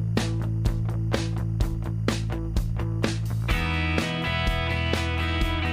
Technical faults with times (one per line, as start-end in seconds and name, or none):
0.00-5.73 timecode bleed